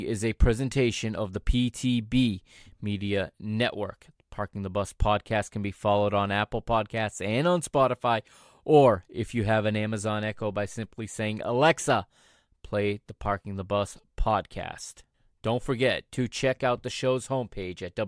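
Nothing stood out on listening to this speech recording.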